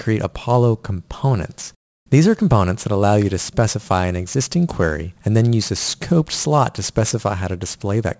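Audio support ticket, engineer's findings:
Aliasing throughout: gritty, metallic sibilants. Fits an unfiltered downsample to 16 kHz; content above 8 kHz folds back, roughly 20 dB down. Spectrogram shows energy packed hard against 8 kHz, with mirrored bands.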